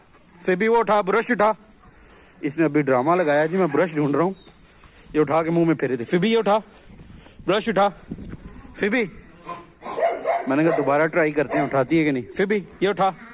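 No technical faults are audible.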